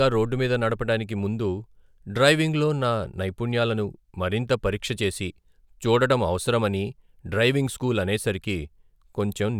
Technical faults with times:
none

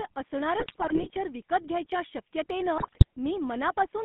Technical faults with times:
0.00-4.04 GSM full-rate codec
0.60-1.13 GSM bit errors
2.78-3.04 GSM bit errors

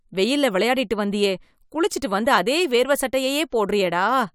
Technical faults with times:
none

